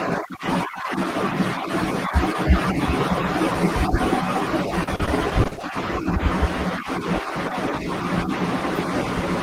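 A speech clip with repeated packet loss (robotic sound) between 4.83 and 5.65 s. Over that stretch the audio breaks up into a rapid run of short holes, about eight of them, none longer than roughly 40 ms. Each is patched by stretching the sound just before it, so around 240 ms, close to a third of the span, is filled-in rather than real. Unlike a single dropout or one concealed burst, the holes keep recurring, giving a choppy texture with pieces missing.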